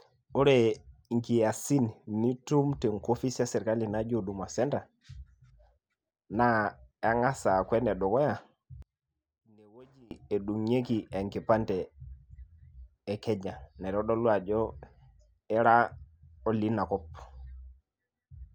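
From 8.82 to 10.11 s the speech drops by about 28 dB to a faint residue, recovering just before "edung'ieki enkipande". The likely cause is one channel inverted, cancelling the centred voice in a mono sum. Unlike a dropout, a faint trace remains instead of silence.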